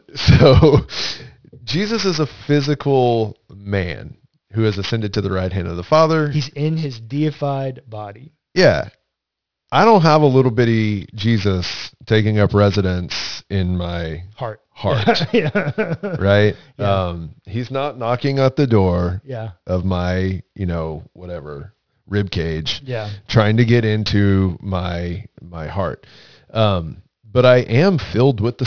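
Speech with aliasing throughout: sibilants sound gritty and metallic, pointing to a drop to about 11 kHz sample rate without an anti-alias filter. On a spectrogram, energy runs hard up to the 5.5 kHz band edge, with folded mirror-image components roughly 20 dB below the signal.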